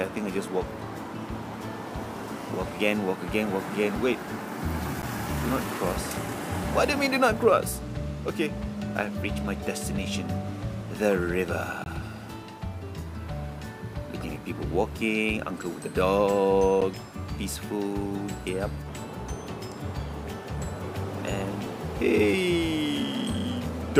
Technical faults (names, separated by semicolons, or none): block of digital silence